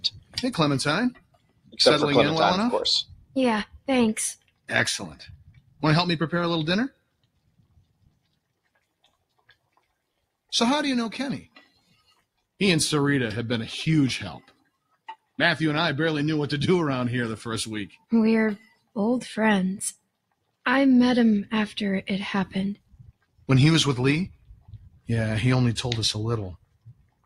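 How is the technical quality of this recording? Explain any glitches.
The technical quality is compromised by processing rather than by the recording itself. A speech-oriented noise suppressor is acting on material it was not built for.

The noise suppressor applied to music or sounds is active for the whole clip. Because it judges steady, sustained energy to be background noise, it repeatedly pulls the level down and lets it back up, with swings of around 20 dB. Onsets slip through while anything held or decaying gets squeezed, so the audio pumps and flutters and loses body and ambience.

The sound cut by the noise suppressor shows up in four stretches. The first runs from 0.0 to 12.39 s, dipping by as much as about 22 dB, with the cuts adding up to around five seconds. Shorter stretches follow at 14.42 to 15.37 s (about 19 dB, roughly 0.3 s affected) and 17.92 to 20.56 s (about 21 dB, roughly 0.7 s). 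The last runs from 22.76 s to the end, reaching about 22 dB. In each stretch the suppressor misreads sustained content as noise, so held sound sinks and tails are chopped short while sharp attacks stay audible.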